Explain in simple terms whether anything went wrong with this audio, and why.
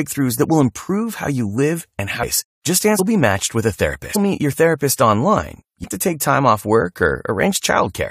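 Damaged data in a compressed stream causes four brief glitches in this speech: at 2.22 s, right after "you live and how"; from 2.98 to 3.00 s, just before "be matched with a"; at 4.15 s, right after that same phrase; and at 5.84 s. Each is a short chirp, squawk, click or gap. Small pieces of the compressed file were corrupted, so the decoder misread those bits, lost its place, and had to hunt for the next clean starting point before playing normally again.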